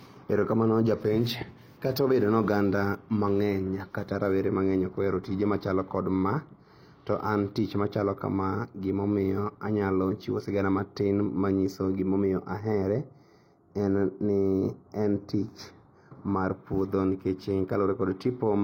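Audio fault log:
12.61–16.54 s, channel delay (comb filtering): one side runs a fraction of a millisecond late, around 0.15 ms. Summed to mono, the shared sound cancels at evenly spaced frequencies starting near 3 kHz, so the speech takes on a hollow or phasey colour with fixed notches.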